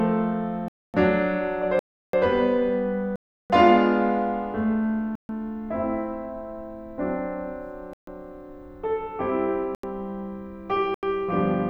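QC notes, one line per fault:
0.68 to 11.03 s, block of digital silence: the music drops abruptly into dead silence seven times, at 0.68, 1.79, 3.16, 5.15, 7.93, 9.75 and 10.94 s. Each gap lasts between 85 and 341 ms. Whole blocks of samples were replaced by zeros, most likely because the output buffer wasn't filled in time. The 341 ms and 85 ms gaps fit 16384- and 4096-sample blocks at 48 kHz.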